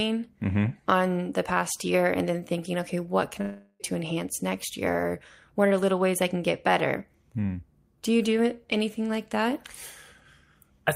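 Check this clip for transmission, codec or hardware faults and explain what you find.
One fault is present, a long network dropout in the speech from 3.41 to 3.82 s. The last sound stretches into a fading buzz, then about 30 ms of silence, and about 0.38 s of speech is skipped. The likely cause is packets stopping arriving. Unlike brief packet loss, the fill decays audibly and content is lost, not delayed.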